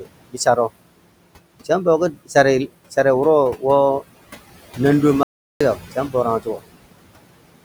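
It's a speech clip with a noise suppressor running hard the whole way through. It's pulling the room noise down by about 21 dB between phrases, so the background, which sits only about 14 dB under the voice, pumps down in the gaps and swells back up under the talking. Those are classic noise suppressor artifacts. The same processor also bites into the speech itself in three spots. It mistakes quiet bits of voice for noise and turns them down along with the background. From 0.30 to 0.57 s it pulls down by up to about 21 dB, from 5.75 to 6.15 s by up to about 11 dB, and from 6.40 to 6.61 s by up to about 18 dB. Each time only a short stretch, roughly a tenth of a second, actually gets swallowed, so that bit of speech sounds swallowed or faint. Separately, there's an audio dropout to silence from 5.23 to 5.61 s, about 374 ms where the signal just stops dead. It's plain silence with no room tone at all, which is what you get when the input feed disappears and the recorder keeps writing nothing. 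The likely cause is a momentary loss of the input, such as a device hiccup, a failed link or a brief mute. Whatever was said in that gap is simply gone.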